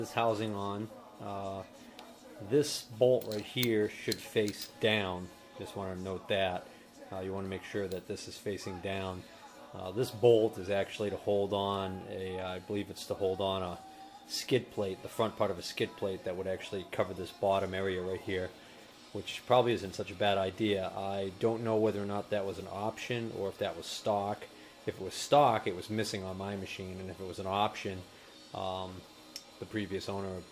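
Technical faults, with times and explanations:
No technical faults can be heard anywhere in the recording, and the signal holds steady and continuous across its full duration.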